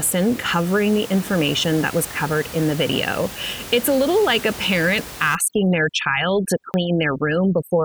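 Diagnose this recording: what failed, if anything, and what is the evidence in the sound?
At the driver or buffer stage, there are jumps in the sound at 1.64 s, just before "that was covered in", and at 6.74 s. Each is a small jump in the sound, with roughly 10 ms missing and no gap. The likely cause is a dropped buffer (overrun): samples were overwritten before being read.

At the processing stage, overdone noise removal starts at 5.35 s, after "little like a parent", and lasts to the end. The room noise, about 16 dB below the speech, drops to near silence with twinkling specks. Noise bands are being cut hard, taking quiet speech detail with them.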